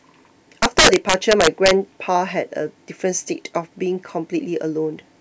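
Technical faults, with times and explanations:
0.63–1.71 s, integer overflow: harsh, violent cracks burst out on the loudest moments of speech, far sharper than ordinary clipping. The signal was pushed about 7 dB past full scale, and the peaks that exceeded the integer limit wrapped around to the opposite extreme instead of being held.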